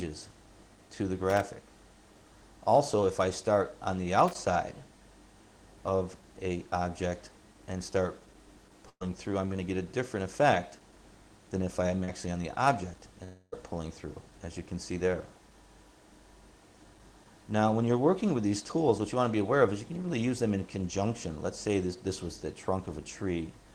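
At 1.3 to 1.41 s and again at 4.28 to 4.35 s, loose connector crackle produces irregular scratchy bursts from a contact making and breaking. Unlike network faults, nothing is held or skipped. From 8.89 to 9.02 s, a burst of packet loss makes the last sound hang on and fade for about 110 ms, then the audio jumps ahead, about 120 ms missing. At 12.04 to 12.1 s, a short concealed packet loss leaves only a brief smear of about 33 ms, as around 40 ms of audio goes missing. From 13.24 to 13.54 s, a fading hold lasts about 0.28 s before the audio returns with roughly that much gone, likely a long network dropout, longer than the earlier burst.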